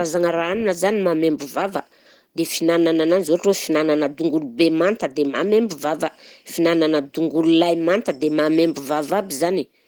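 Nothing stood out as a technical problem on listening to this speech recording.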